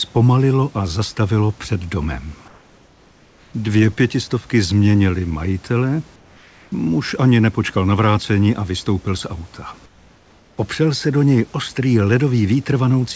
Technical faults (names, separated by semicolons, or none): comfort noise in place of the background